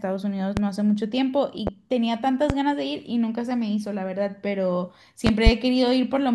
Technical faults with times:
0.57-0.61 loud pop
1.67-1.71 loud pop
2.50-2.54 loud pop
5.27-5.50 loud pop

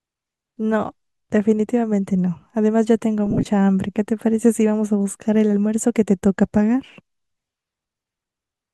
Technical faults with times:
3.26-3.46 lost LE Audio frames

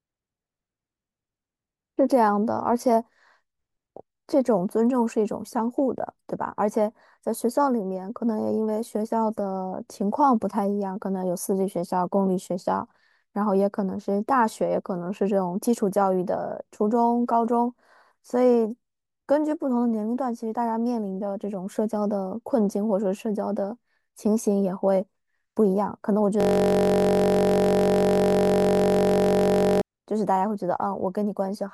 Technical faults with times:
26.40-29.81 system hang loop

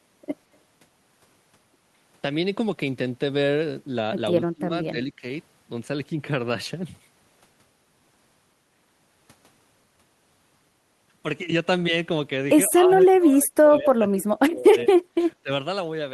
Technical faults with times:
4.53-5.23 speech suppressed in double talk
12.69-15.50 speech suppressed in double talk

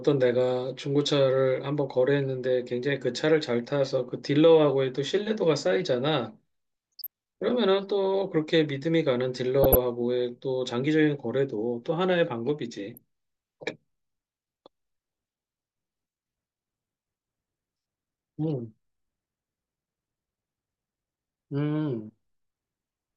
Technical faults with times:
6.92-7.07 DAB burbling
9.63-9.75 DAB burbling
12.94-12.98 DAB burbling

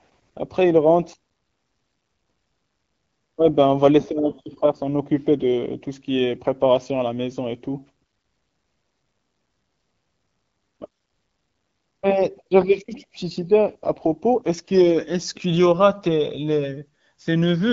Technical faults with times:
none

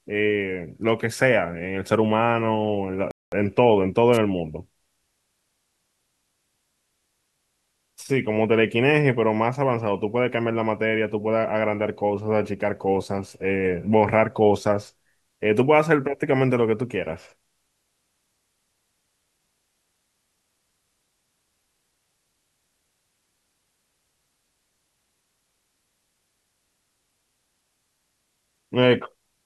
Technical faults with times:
3.11-3.32 playback stall
4.13-4.18 wireless microphone noise hit

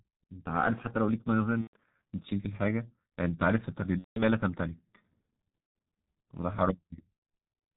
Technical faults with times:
0.00-7.77 G.723.1 codec
1.61-1.76 VoIP packet loss concealed by the speech codec
3.99-4.23 VoIP packet loss concealed by the speech codec
5.78 VoIP packet loss concealed by the speech codec
7.13-7.19 VoIP packet loss concealed by the speech codec

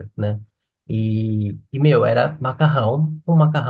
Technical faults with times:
none

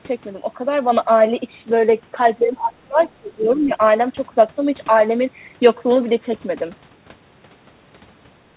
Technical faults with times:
2.41-3.82 speech suppressed in double talk
3.01-3.10 other side's voice leaking through
3.57-3.61 other side's voice leaking through

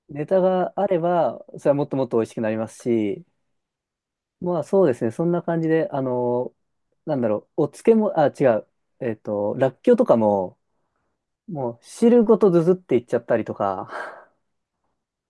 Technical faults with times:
none

